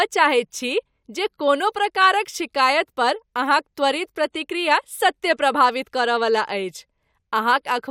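Nothing in the speech stood out as a technical fault on listening.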